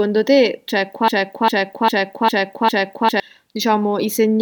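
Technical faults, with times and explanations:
1.08 to 3.20 s, broken-record loop: a 0.40 s fragment of the speech plays five times back to back, identical on every pass, so the sound stutters in a rigid rhythm and the speech that belonged to those two seconds never arrives. The likely cause is a stalled player or stream resending the last piece it held. On a waveform or spectrogram, the same shape tiles exactly every 0.40 s, with an abrupt seam at each join.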